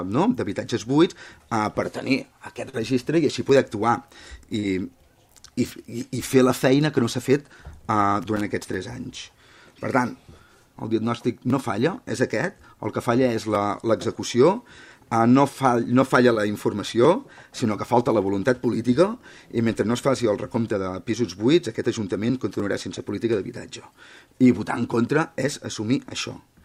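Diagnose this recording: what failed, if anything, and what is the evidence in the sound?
Network side: three bits of short concealed packet loss, at 2.69, 4.59 and 16.33 s. About 40, 40 and 20 ms went missing, and the decoder smeared the last sound across each gap.

Analogue wiring: a loose connector crackle from 8.22 to 8.41 s. A bad contact kept making and breaking, chopping the signal into an irregular scratchy burst.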